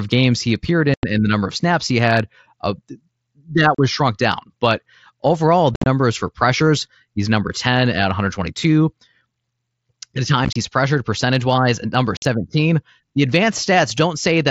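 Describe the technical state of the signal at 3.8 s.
Unconcealed Bluetooth headset packet loss: from 3.75 to 3.79 s, about 37.5 ms of mSBC voice packets never arrived and silence or an idle pattern replaced them, leaving an abrupt gap just before "was shrunk down".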